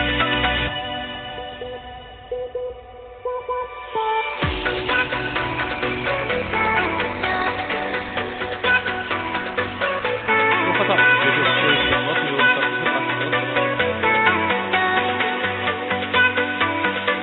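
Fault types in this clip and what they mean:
Adaptive stream at a lower bitrate: from 4.29 s to 10.29 s codec artefacts grow heavier, which fits a step down from Opus at 64 kbit/s to 12 kbit/s. Unlike a dropout, there is no gap, and quality switches abruptly both ways.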